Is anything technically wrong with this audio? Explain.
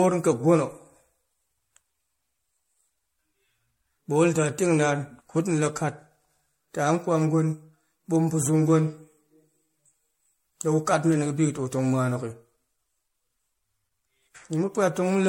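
Yes. Throughout the speech there is generation loss. The sound is swirly, smeared and hollow, consonant attacks are blurred, and there is no content above 16.5 kHz. This is likely from repeated lossy coding, with the audio decoded and re-encoded around seven times, pointing to MP3 at roughly 64 kbit/s. Each pass requantises on a shifted frame grid, so the noise and spectral gaps stack up beyond what one encode at that rate would leave.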